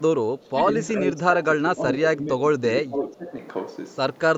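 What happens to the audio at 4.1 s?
Nothing goes wrong at 4.1 s; the speech continues intact through that moment.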